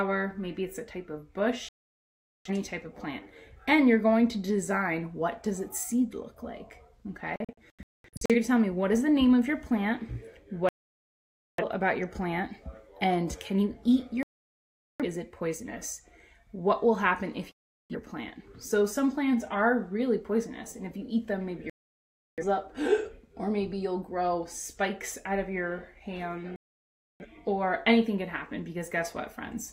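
The audio mutes in a digital broadcast dropout at 1.69–2.50, 7.36–8.35 (several short holes), 10.69–11.64, 14.23–15.05, 17.52–17.95, 21.70–22.43 and 26.56–27.26 s. Unlike concealed network packet loss, the receiver falls fully silent on corrupted frames, and the programme resumes further on with the missing material gone.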